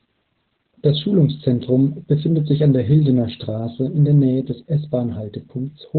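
Speech clip, with heavy Opus voice compression throughout: narrowband SILK coding, likely near 8 kbps, leaves it muffled and hoarse; a spectrogram shows nothing above 4.4 kHz.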